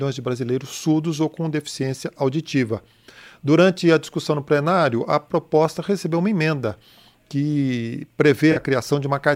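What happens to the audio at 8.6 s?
Just before that point, from 8.52 to 8.58 s, there is a brief AAC frame loss with concealment. The decoder rebuilds about 43 ms from the last good spectrum, which fits two lost frames, so the gap sounds like a smeared, noisy or phasey patch rather than the clean silence of a dropout.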